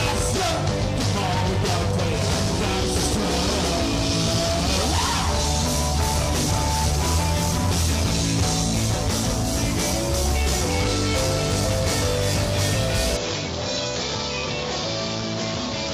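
An input switched to a poorer device at 13.17 s, lasting to the end. With no gap at the change, the sound turns duller, losing everything above 7.4 kHz, drops a few decibels and gains a faint new background noise, likely from the recording changing to another microphone.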